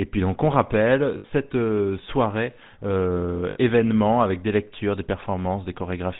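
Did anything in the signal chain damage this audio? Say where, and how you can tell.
Yes. The GSM full-rate codec runs throughout the speech. Everything above 4 kHz is missing, and voiced sounds have that buzzy, gravelly grain. This is the codec stage: a vocal-tract model driven by a sparse, regularly spaced pulse excitation rather than the actual waveform. The damage is plainly audible, and the character points to the 13 kbps GSM full-rate coder.

Lost GSM frames cause two brief metallic rings. The first runs from 1.18 to 1.25 s, right after "puis donc on rappelle" and before "euh soirée euh événement". The second runs from 3.50 to 3.58 s, after "euh soirée euh" and before "événement avec des lectures". Each gap is about 60 ms, which fits three consecutive 20 ms frames dropped on the network or radio link. The decoder fills the gap by repeating the last good frame's parameters, so the sound freezes into a rough ring instead of going silent.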